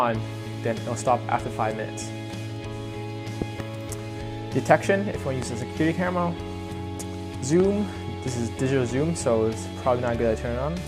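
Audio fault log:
3.42–3.62 s (two pops), 5.42–5.45 s, 7.60–7.62 s: loud pop. Sharp thumps reach about 15 dB above the sound (the last about 10 dB), which carries on underneath, unlike a dropout. They are likely brief voltage pulses from a switch or static.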